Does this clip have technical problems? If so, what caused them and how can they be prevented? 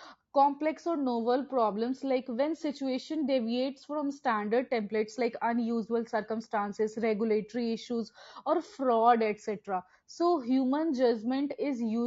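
Yes. Throughout the speech, a low-delay codec working with very short frames has too few bits to resolve the voice's harmonics, which points to AAC-ELD, low-delay AAC compression, likely at around 32 kbps. The result is rough, grainy speech with noise filling between harmonics. Prevent it by giving the call codec a higher bitrate or a codec with longer frames.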